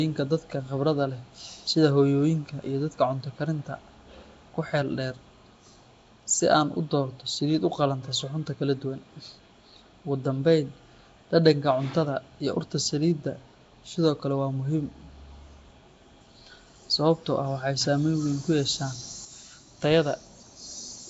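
From the start, the speech carries a rough, hissy halo and a smeared, underwater quality. Nothing is heard above about 7.7 kHz. The damage is plainly audible. This points to Nellymoser compression, likely the Nellymoser Asao codec used for Flash microphones, at a rate that fits a 32 kbps stream. That codec works on short fixed blocks with a tight, constant bit budget. Weak bands get no bits and are filled with noise, which explains the hiss and blur.

At 19.25 s there is a sudden gain jump. The level drops by about 6 dB in one step and stays there to the end. The background noise falls along with the speech. The drop happens from one sample to the next with no fade. That fits a digital gain change or bit shift applied without a ramp, which is the likely cause.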